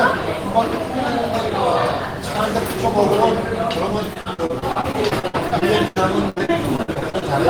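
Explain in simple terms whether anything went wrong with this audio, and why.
Repeated packet loss (robotic sound) runs from 4.13 to 7.24 s. Small pieces of the audio kept going missing, over twenty times, each up to about 82 ms. The player filled each hole by stretching the last bit of sound, so roughly a quarter of that stretch is patched, which makes it sound choppy and robotic.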